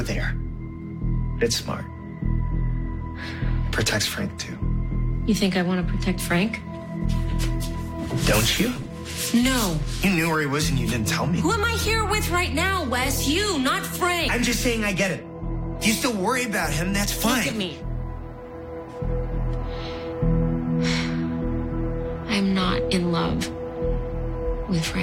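No technical faults can be heard anywhere in the audio. There is no moment in it that needs a timestamp or a fix.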